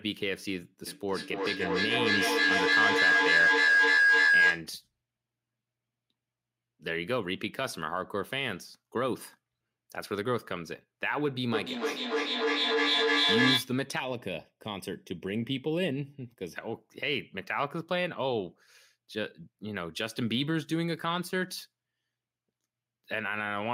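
From 0.87 to 4.7 s, a feedback howl builds near 1.5 kHz. A shared-room loop gains level each trip, with the loop coming round roughly every 300 ms, and the howl peaks about 8 dB above the speech.

From 11.53 to 13.77 s, there is feedback echo between two devices. Each word returns roughly every 300 ms, thinner and ringing, reaching about 5 dB above the speech.

From 13.99 to 16.56 s, channel delay causes comb filtering. One channel lags by a fraction of a millisecond. Summed to mono, the speech turns hollow, with the first notch near 1.5 kHz.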